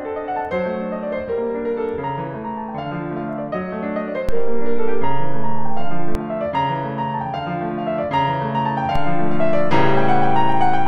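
At 4.29 s the music's zero line jumps in a DC step of about -10 dBFS, heard as a low thump while the music continues unchanged. The offset holds until 6.15 s, where it steps back with a second thump. A second DC step, about -13 dBFS, arrives at 8.96 s with another thump and stays until the clip ends. Both behave like a converter recalibrating or an offset input being switched in.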